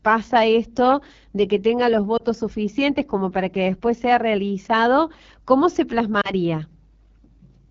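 Throughout the speech there is a rough, raspy grain, with the top of the band sounding hissy rather than crisp. This is the AMR wideband (HD Voice) codec at one of its lowest rates, which fits the 8.85 kbit/s mode. Below 6.4 kHz the voice is rebuilt from a pulse-driven vocal tract model, and the 6.4 to 7 kHz region is filled with shaped noise. At this rate there are too few bits to model the voice cleanly, so the damage is plainly audible.

From 2.17 to 2.23 s, between "de que tenga los" and "suficientes como para que", the voice briefly dips and warbles before recovering a little roughly. A second warble and dip, about twice as long, runs from 6.21 to 6.33 s. Both are lost AMR speech frames, each a single 20 ms frame that failed its checksum after radio errors. The decoder covered the gap by reusing the last good pitch and vocal tract settings at reduced gain, so the sound briefly dips before the voice returns.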